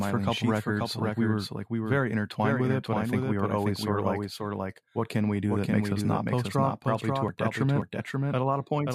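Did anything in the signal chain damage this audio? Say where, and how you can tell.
Yes: a doubled audio track runs throughout. A dry, full-band copy trails about half a second behind, a few dB quieter, likely captured again by a slower second path.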